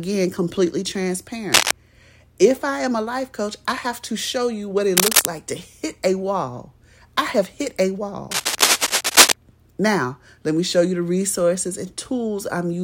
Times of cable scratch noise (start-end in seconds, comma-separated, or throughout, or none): 1.52-1.73, 4.97-5.29, 8.31-9.32